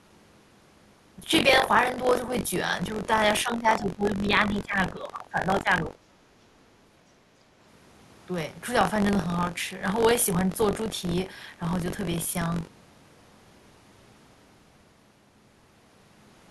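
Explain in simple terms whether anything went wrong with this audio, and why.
Buffer tearing runs throughout: a steady robotic buzz near 47 Hz, as each chunk of sound, which fits a 1024-sample buffer, carries a stale sliver joined on abruptly.

Speech suppressed in double talk: the speech dips and fades from 3.43 to 6.03 s and at 6.37–6.41 s, likely an echo canceller turning down this side's voice along with the loudspeaker echo while both sides talked at once.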